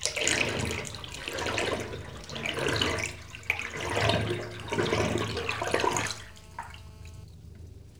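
From 6.06 s to 7.24 s a hard, raspy buzz sits under the audio, about 26 dB below the main signal, pitched at 217 Hz with a dense stack of harmonics and no relation to the sound itself. It stays nearly steady. This is GSM phone buzz: a nearby 2G phone on a call was transmitting in bursts 217 times a second, and the audio circuitry rectified those radio pulses into an audible tone.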